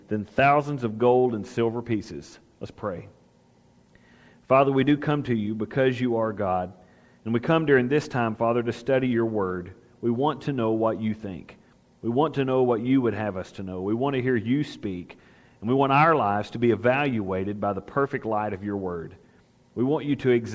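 No technical faults can be heard in this audio. It has passed through a call path, and its content stops at about 8 kHz, which fits a wideband codec such as G.722.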